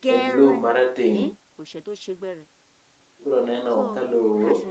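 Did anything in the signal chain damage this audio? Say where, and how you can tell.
No, nothing in the chain damaged this speech; the sound simply stops at about 8 kHz, as you'd expect from the call's microphone processing and a wideband Opus setting.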